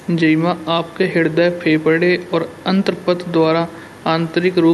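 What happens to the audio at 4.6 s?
At 4.6 s the speech carries on intact, with no fault to be heard at that moment.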